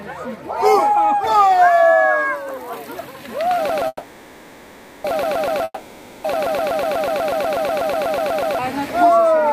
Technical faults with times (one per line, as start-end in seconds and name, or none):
3.69-8.59 broken-record loop
3.87-5.07 call audio freeze
5.64-6.39 long network dropout